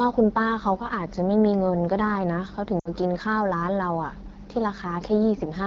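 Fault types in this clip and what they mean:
AMR wideband (HD Voice) codec: The speech went through the AMR-WB codec at 8.85 kbit/s, the second-lowest rate. At that rate the codec models the vocal tract and pulse excitation below 6.4 kHz, then fills the top band up to 7 kHz with shaped noise, with little detail left in either. Across the whole clip the speech carries a plainly audible rough, raspy texture, and the upper band sounds hissy rather than crisp.
Lost AMR speech frames: A run of speech frames failed their radio checksum, so the decoder repeated the last good pitch and vocal tract settings at decreasing gain. From 2.80 to 2.89 s, about 60 ms, which fits three 20 ms frames, the sound fades and drops to near silence within two frames. When good frames return it comes back briefly weak and rough.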